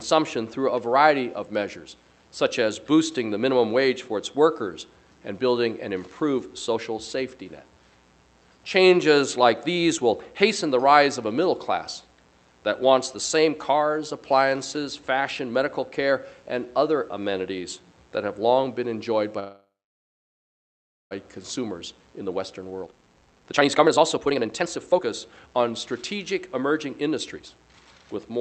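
At 19.39 s the audio stalls for about 1.7 s, a call audio freeze: the last bit of sound trails off briefly, then roughly 1.4 s of silence, and it picks up exactly where it left off, so nothing's lost, just a gap pushed in. The likely cause is packets held up until the jitter buffer drained. Right after, the jitter buffer speed-up kicks in: from 21.59 to 25.87 s it plays about 38% fast at unchanged pitch, trimming roughly one and a half seconds of backlog in tiny pitch-period cuts, so it sounds rushed. A milder pass from 26.32 to 27.51 s runs about 6% fast, shaving off a small sliver. Underneath, the Opus call path at 48 kbps tops out around 8 kHz.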